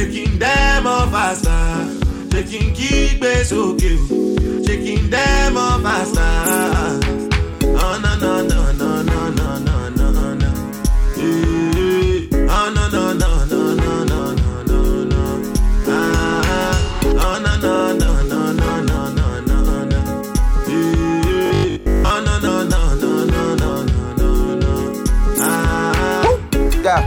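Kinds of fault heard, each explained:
Repeated frames: At 17.74 s a short block of compressed audio plays again. The repeat lasts about 46 ms and occurs twice, adding 92.9 ms to the clip. It is heard as a brief stutter.
Robotic sound from repeated short buffers: From 21.46 to 22.10 s the sound turns into a rigid, metallic buzz at 50 Hz. Most of that stretch is filled by repeating a fragment, likely a 20 ms buffer looping because new audio arrived too seldom.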